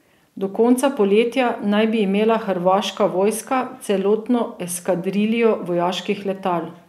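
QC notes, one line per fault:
No fault to list in these QC notes.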